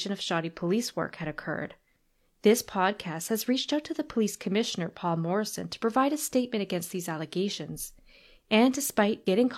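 Nothing in the speech stood out as a fault on listening.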